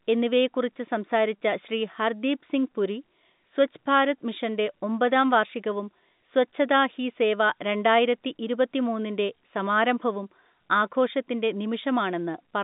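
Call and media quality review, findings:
No faults found: the speech carries the narrow 150 Hz to 3.7 kHz band and empty region above 3.8 kHz of ordinary G.711 telephone coding, consistent with a 64 kbps A-law line, with nothing beyond that path's normal character.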